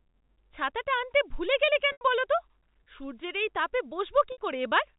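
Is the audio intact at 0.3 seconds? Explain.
Yes, the speech at 0.3 s is intact, carried through the G.711 telephone coding path with no fault at that moment.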